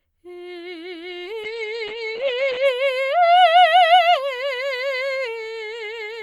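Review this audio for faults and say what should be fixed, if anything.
Call bitrate drop from 1.45 to 2.71 s: the encoder fell from 48 to 9 kbps, narrowing the music from 20 kHz to 8 kHz, so it turns muffled and coarse.

Dropped samples at 5.85 s: a single sharp click, likely from roughly one lost sample making the waveform jump abruptly.

To prevent these, keep enough bandwidth headroom that the encoder doesn't throttle, and make sure the playback path never skips samples.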